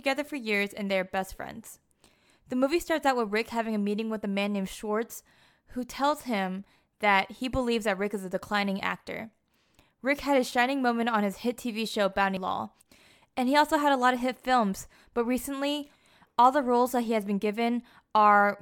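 At 12.37 s the speech is broken by a brief blip from damaged data in a compressed stream: corrupted bytes make the decoder misread a frame and lose sync until the next header. A spectrogram shows a thin broadband vertical streak, the waveform a sudden discontinuity.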